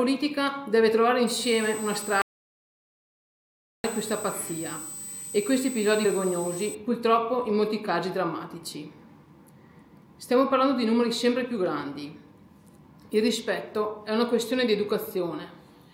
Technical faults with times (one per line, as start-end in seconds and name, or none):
1.27-6.75 switching supply whistle
2.22-3.84 audio dropout to silence
6.04 compressed frames skipped